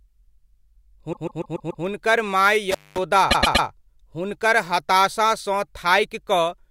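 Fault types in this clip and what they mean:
Repeated frames: A short stretch of compressed audio was decoded more than once, so the same slice of speech plays again and again. From 1.12 to 1.84 s, a 144 ms block repeats five extra times, adding 0.72 s. From 3.30 to 3.66 s, a 120 ms block repeats three extra times, adding 0.36 s. Each one is heard as a stutter.
Intermittent contact: A loose plug or cable briefly breaks the signal path, so the speech drops out for a moment. Here the line opens from 2.71 to 2.98 s, with the actual gap lasting about 0.21 s. Crackle marks the edges where the contact breaks and remakes. In between, only faint hiss is left where the speech should be. The sound then returns once the connection closes again.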